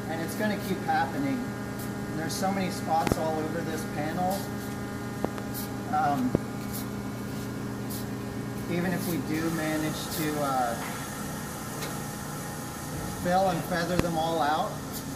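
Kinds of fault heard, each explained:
Loud pop: Sharp pops sit over the continuing sound, two paired, two single, about 20 to 25 dB above it. Likely a sudden voltage pulse.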